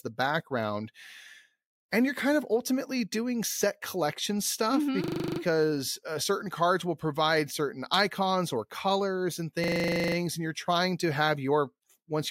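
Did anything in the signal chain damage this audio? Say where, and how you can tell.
Yes, a system hang loop at the driver or buffer stage: a 40 ms slice repeats exactly at 25 Hz from 5.04 to 5.4 s and from 9.64 to 10.16 s (between "icons or colors and" and "and you're trying to"). The repeats are identical rather than smeared as packet-loss concealment would be, which points to a frozen ring buffer.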